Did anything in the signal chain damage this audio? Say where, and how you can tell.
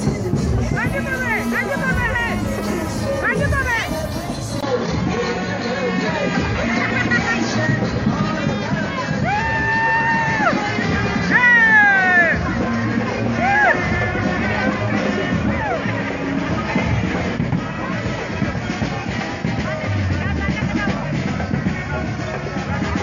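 Yes. At 4.61 s a 20 ms gap appears, and from there to the end nothing passes above 7 kHz, with a faint new noise floor at unchanged level. That is likely an input switched to a poorer device at the driver stage, narrowing the band.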